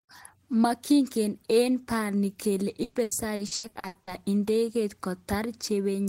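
Right after "eng bani kele", from 2.83 to 4.10 s, there's repeated packet loss (robotic sound): nine gaps, the longest 120 ms, each patched by stretching the last bit of audio. Nearly half that stretch is concealment, so it turns choppy.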